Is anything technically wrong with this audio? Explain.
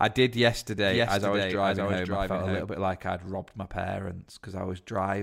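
Yes. From 0.85 to 2.63 s, just before "bit like I'd robbed", there's a doubled audio track: a dry copy about 5 dB quieter trails about half a second behind, likely from a slower second capture path, and cuts in and out abruptly.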